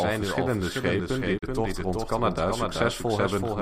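A short speech recording runs with a second, slightly quieter copy of itself trailing behind the whole way through, about 5 dB down and roughly 0.4 s late. The echo is full-band and dry, with no decay or room colour, so it sounds like a doubled audio track rather than reverberation. The likely cause is the same signal being mixed in twice, once directly and once through a slower capture path or an edit that left two copies out of step. From 1.37 to 1.44 s there is a digital broadcast dropout. The sound fades out over about 20 ms, leaves a gap of around 32 ms, and then comes back. That length fits a single lost frame: the receiver muted when bad or missing data arrived and resumed once valid frames returned, so whatever was sent during the gap is gone.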